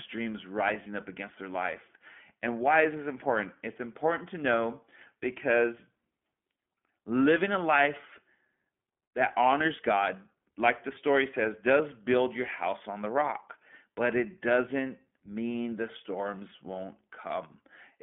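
Throughout the speech, the audio carries iLBC codec damage. Nothing above about 3.7 kHz survives, and the low end thins below roughly 200 Hz, giving a telephone-band sound. Because each short block of excitation is coded on its own, with a texture that fits 20 ms frames and the 15.2 kbps mode, the speech stays intelligible but sounds plainly rough and synthetic.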